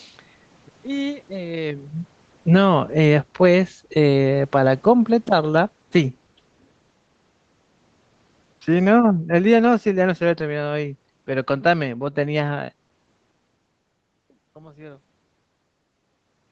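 The call's automatic gain control twice judged the input too loud or its background noise too strong and pulled its gain down gradually. The automatic gain falling takes it about 8 dB lower from 2.39 to 5.58 s, then about 5 dB from 8.68 to 10.89 s. In this speech recording, each slow drop sinks the voice and the room noise together. That is unlike the talker's own movements around 1.5 and 13 s, where only the voice changes level.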